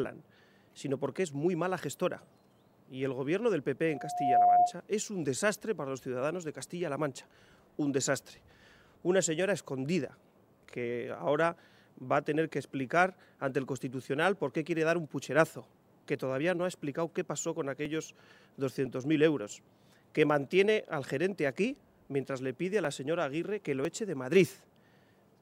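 From 3.88 to 4.74 s a loudspeaker feedback squeal builds over about half a second into a 714 Hz tone roughly 10 dB above the signal, as the microphone-to-speaker loop exceeds unity gain. Between 17.85 and 23.85 s, periodic USB or driver dropouts skip about 1 ms of audio every 1.0 s, leaving about seven regular ticks where a blocked bus or driver briefly drops samples.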